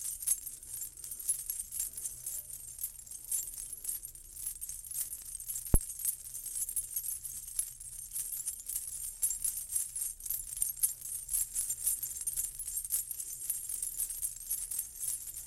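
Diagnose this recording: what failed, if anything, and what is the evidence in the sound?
A phantom power thump from the analogue input stage appears at 5.74 to 5.80 s: a deep thud peaking at about -10 dBFS and dying away within 13 ms. Switching the supply on or off on a live input pushed a voltage step through the coupling capacitors. The waveform shows one large low-frequency swing, and the spectrogram shows a brief burst of energy at the bottom of the range.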